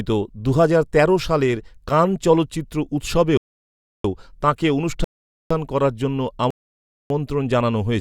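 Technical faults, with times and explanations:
3.37–4.04 s, 5.04–5.51 s and 6.51–7.10 s, rebuffering stall: the speech drops to dead silence three times, the second ending just before "করার জন্য" and the third starting right after it, then resumes exactly where it stopped. The player ran out of downloaded audio and waited for more, so nothing is lost but about 0.67 s, 0.46 s and 0.60 s are added.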